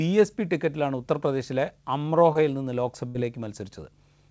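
At 2.33 to 2.36 s, short concealed packet loss: about 20 ms of the call failed to reach the decoder in time, and the receiver patched the gap by extending the preceding sound before blending back into the real speech. It comes through as a brief smear or wobble in the voice, with roughly 20 ms of the original gone.

At 3.08 to 3.15 s, a burst of packet loss: about 70 ms in a row arrived too late or never arrived. The receiver stretched the last sound across 64 ms of that while fading it down, giving a held buzz or dwindling hiss before the speech picks up slightly further on. The band-limited sound, with nothing above 8 kHz, fits a G.722 call path.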